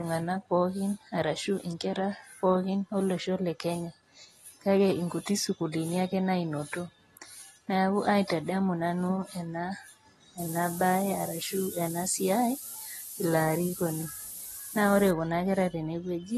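Speech, and the whole thing sounds dull and smeared with a fizzy edge, nothing above 12.5 kHz: AAC compression is the likely cause, probably around 32 kbps. From 10.38 to 15.11 s there's low bit depth with noise shaping, a steady thin hiss climbing toward the top, nearly as loud as the speech, consistent with about 5 bits.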